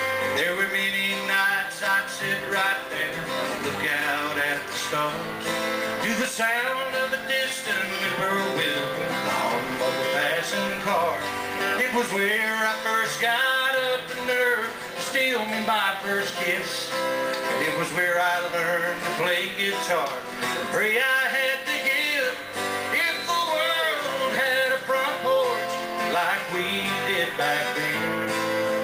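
No technical faults can be heard anywhere in the clip. The audio runs without any break, dropout or distortion that would point to a problem in the recording or playback chain.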